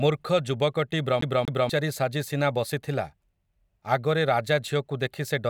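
A CD stuck on one turn throws the laser back from 1.21 to 1.69 s, so a 0.24 s slice repeats twice, stuttering with brief mutes before "ସାଜି ସିନା ବସିଥିଲା".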